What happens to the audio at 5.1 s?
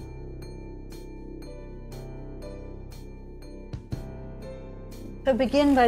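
Repeated frames occur from 5.05 to 5.09 s: a 40 ms block of compressed audio, which fits a couple of short codec frames, is decoded and played a second time. The result is a brief stutter as that slice sounds twice, lengthening the audio by 40 ms.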